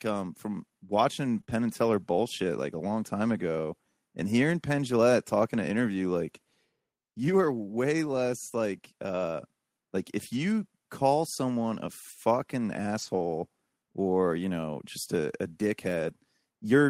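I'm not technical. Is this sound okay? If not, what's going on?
No. The sound has small dropouts, the kind an internet call gets when bits of the signal go missing on the way.

The first kind is lost packet rebuilt from error correction. A small piece of the call was lost, but the next piece carried a rough backup copy of it. The receiver played that copy, so there is no silence. Those moments just sound rougher and noisier. It happens at 1.37 to 1.39 seconds and 1.50 to 1.52 seconds. It happens for longer at 12.98 to 13.28 seconds, which points to several separate pieces lost. It happens again at 16.04 to 16.10 seconds.

The second kind is short concealed packet loss. Here a piece arrived too late and had no backup. The receiver guessed, stretching the last bit of sound to cover the hole, then blended back into the real speech. You hear a brief smear or wobble. A quick sound can disappear. 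This happens at 1.41 to 1.45 seconds and again at 1.45 to 1.50 seconds, in the same rough stretch as the first two repairs.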